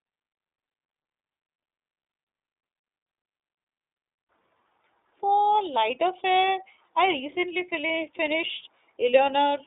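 A speech clip coded throughout with the iLBC codec: nothing passes above about 3.8 kHz, so a spectrogram shows a flat ceiling there, with energy confined to roughly 300 Hz to 3.7 kHz. Each 30 ms frame is coded independently, consistent with the 13.33 kbps mode, giving plainly audible rough, synthetic texture.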